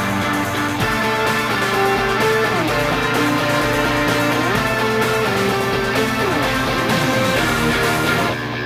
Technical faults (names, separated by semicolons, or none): mains hum